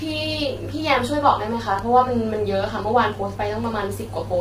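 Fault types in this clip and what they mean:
low-delay AAC compression: heavy, rough, grainy coding damage across the whole clip, likely from AAC-ELD short-frame encoding at a low bitrate, which fits 24 kbps.
loud pop: one sharp pop from 1.79 to 1.82 s, roughly 10 dB above the speech, likely a brief voltage spike in the chain, with speech continuing underneath.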